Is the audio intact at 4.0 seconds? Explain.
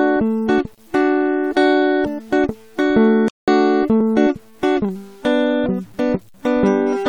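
No. At 4.01 s there is an overlap between stream segments. Two segments claim the same few milliseconds, and the player discards the overlap from music that was never doubled. The waveform jumps, giving a tiny skip. Its timing fits 2-second segments.

Grainy distortion also runs through this moment and the whole clip. It tracks the music and is roughly 35 dB below it. The likely cause is low bit depth without dither, which fits 8-bit truncation. The rounding error follows the signal, so quieter passages turn gritty.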